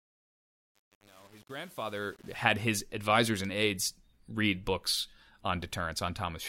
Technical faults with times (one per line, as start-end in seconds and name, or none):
0.00-2.40 truncation distortion on a fade